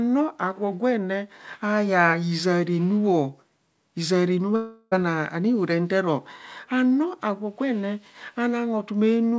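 A speech clip with a long network dropout from 4.56 to 4.93 s, right after "hizaa renu". About 0.36 s of audio is missing, and a fading buzz or hiss fills most of the gap. The likely cause is lost packets. Nothing above 8 kHz remains, which fits a G.722 call path.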